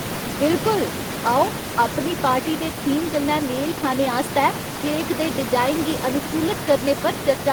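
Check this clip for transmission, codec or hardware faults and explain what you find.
No faults turn up in this check; the room noise sitting about 9 dB below the speech belongs to the recording itself.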